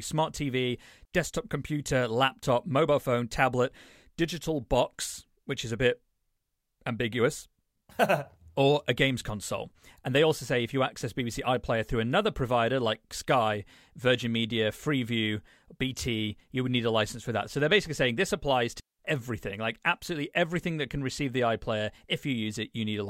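At 1.05 s, just before "desktop computer laptop mobile", and again at 18.80 s, after "basically saying this applies", there's a digital wireless dropout. The receiver lost the link and muted, leaving clean, near-silent holes of about 68 ms and 196 ms with no noise burst either side.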